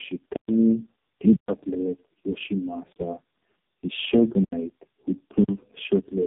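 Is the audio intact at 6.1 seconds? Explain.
No, at 6.1 s you're still hearing tandem speech coding, which runs through the whole clip. The speech was decoded and re-encoded across several codecs in a row, each working on the last one's damage, so it sounds rough, muffled and warbly, with nothing above 3.8 kHz.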